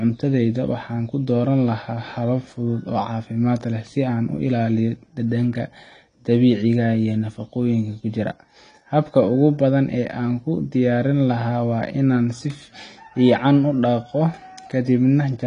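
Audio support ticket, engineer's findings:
AAC compression, throughout the speech. Audibly dull and smeared, with a warbling, fizzy texture on sustained vowels and sibilants. Spectrogram: hard shelf, nothing above 10 kHz, with gappy, blotchy bands below it. Likely an AAC-LC encode, with damage that fits a bitrate around 32 kbps. Coarse quantisation against the hearing model strips fine high-frequency detail.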